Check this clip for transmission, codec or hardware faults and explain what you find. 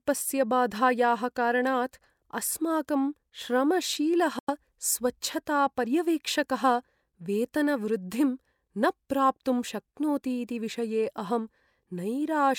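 There is one fault, a Bluetooth dropout, in this speech clip. Just after "बाधायाः कारणात् अस्माकं श्रमशीलः", from 4.39 to 4.50 s, the sound cuts out for about 0.11 s and then comes back mid-stream, as though it had kept playing through the silence. The likely cause is audio packets reaching the headphones too late and being discarded, leaving a hole until good data arrived. A gap this size fits roughly four lost packets.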